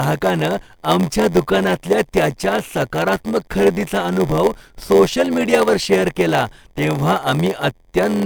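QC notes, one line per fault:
Throughout: block size mismatch (padded). Zero-filled gaps in each block, fitting a 512-sample read, buzz at 86.1 Hz; speech runs at 0.938 speed but keeps its timbre, unlike a resampling slowdown.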